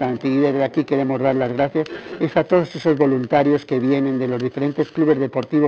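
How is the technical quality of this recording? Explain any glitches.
The recording carries one fault for its whole length: periodic clock jitter. It comes through a narrowband call path with nothing above 4 kHz, which fits a telephone codec such as G.711.

Periodic clock jitter, present throughout: interference modulates the converter's sampling clock at around 1.5 kHz. Every component of the sound gains sidebands spaced that far above and below it, strongest on higher frequencies. The result is a rough, metallic edge on the sound that disappears during silences.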